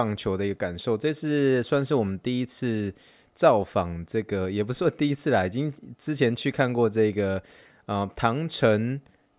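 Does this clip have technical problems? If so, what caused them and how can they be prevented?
No, there's nothing technically wrong to hear in this speech clip, so there's nothing that needs preventing.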